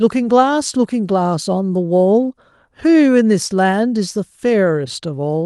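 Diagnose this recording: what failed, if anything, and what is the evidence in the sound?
Nothing failed: no stage from the analogue input through conversion, processing, transport and playback leaves any audible trace of a fault anywhere in the speech.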